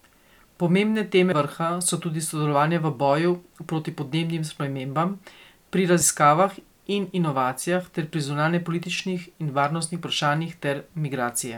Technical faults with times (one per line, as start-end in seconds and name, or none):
1.32 compressed frames skipped
6.01 compressed frames skipped